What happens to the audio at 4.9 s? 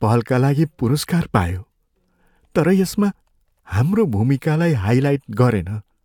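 At 4.9 s the speech carries on intact, with no dropout, click, distortion or other fault.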